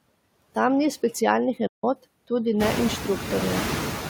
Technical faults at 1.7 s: noise suppressor artifacts; playback stall

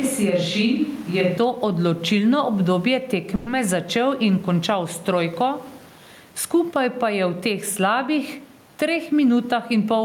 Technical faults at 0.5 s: gain pumping; switch to a distant microphone

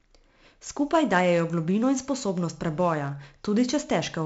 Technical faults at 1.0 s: 4-bit ADPCM compression

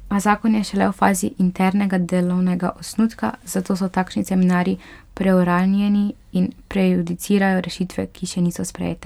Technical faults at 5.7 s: none

